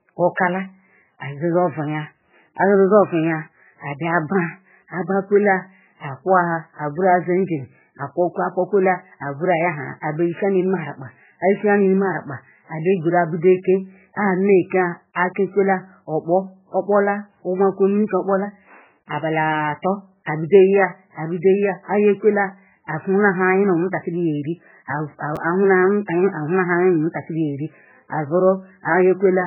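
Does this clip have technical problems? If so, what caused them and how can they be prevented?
Yes. The encoder was likely starved of bits in MP3 compression; the heavy damage fits a very low bitrate around 8 kbps. It discards everything above 3 kHz and switches weak frequency lines on and off, so the speech sounds muffled, watery and swirly, with smeared attacks throughout. Encoding at a higher bitrate or with a modern speech codec prevents this.

At 25.36 s, chunks out of order: a buffer of about 5.8 ms was written late, which points to a single block swapped with its neighbour. Nothing is lost, but the reordered pieces leave a brief jumbled flicker. Sequence-numbering buffers and reordering them before playback prevents it.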